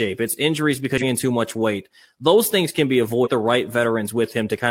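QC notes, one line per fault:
0.98–1.03 s and 3.21–3.28 s, damaged data in a compressed stream: corrupted bytes make the decoder misread frames and lose sync until the next header, giving brief glitches of about 50 and 70 ms, the first between "it's injuries" and "too much weight those", the second after "those things can be".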